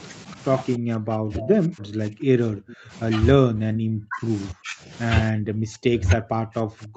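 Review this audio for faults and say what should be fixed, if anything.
Speech suppressed in double talk: the echo canceller likely could not tell the near talker apart from loudspeaker echo while both sides spoke, and turned everything down. The speech dips by about 40 dB or breaks into pieces from 0.77 to 2.93 s, 3.35 to 4.29 s, 4.52 to 4.91 s, and from 5.31 s to the end. Prevention: tune the double-talk detector so that the near talker's speech is kept while the far end is active.

Echo leak: the loudspeaker side's echo canceller likely let part of its microphone pickup through and sent it back. A brief scrap of delayed voice, about 290 ms behind the original and about 15 dB below the speech, is heard from 1.40 to 1.47 s. Prevention: give the echo canceller enough tail length and adaptation for that delay, or use a headset instead of a loudspeaker.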